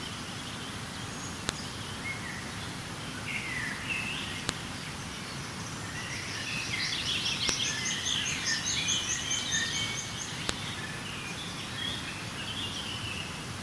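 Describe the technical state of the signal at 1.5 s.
At 1.49 s there is a file header played as audio: a single sharp, loud click lasting around a millisecond. It marks a point where separately written WAV pieces were joined without stripping the header, so its few dozen bytes of metadata are read as sample values. On the waveform it shows as an isolated, near-vertical spike unrelated to the surrounding signal. On a spectrogram it appears as a thin vertical line of broadband energy across all frequencies.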